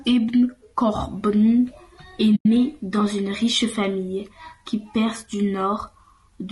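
Across the whole speech clip there is plainly audible low-delay AAC compression damage. The voice sounds rough and grainy. Noise fills the gaps between the pitch harmonics, and the top band sounds thin and synthetic. The likely cause is AAC-ELD, the low-delay coder used for video calls. Its short frames resolve harmonics poorly and spend bits quickly. The level of damage fits a bitrate of about 32 kbps.

From 2.35 s to 2.46 s, AAC frame loss with muting cuts a hole in the speech. The decoder received no data for this stretch and set its spectrum to zero. Overlapping windows fade the sound down into the gap and back up after it. The hole is soft-edged. Its length of about 100 ms points to a run of several consecutive lost frames.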